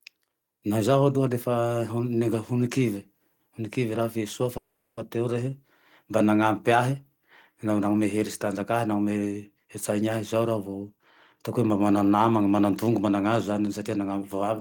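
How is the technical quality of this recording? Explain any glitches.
The speech has two glitches, both typical of a network call.

From 4.57 to 4.99 s, just before "teo rehe mba nanampy", there is a call audio freeze. The last sound stretches into a fading buzz or hiss for 0.4 s. The likely cause is delayed packets emptying the jitter buffer. Nothing is lost, but the speech resumes late.

From 10.82 to 11.74 s, ending at "mana namane", a jitter buffer speed-up runs the speech at 109% speed with unchanged pitch. Tiny pitch-period slices, about a tenth of a second in total, were cut to shrink the built-up delay. It sounds hurried.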